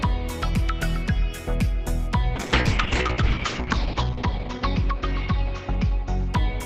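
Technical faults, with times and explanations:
2.37 s to the end, call bitrate drop. The encoder's rate falls from 48 to 7 kbps, bottoming out for 1.4 s. Bandwidth narrows from 20 kHz to 8 kHz. Coarser coding and lost highs make the sound rough and muffled, with no recovery.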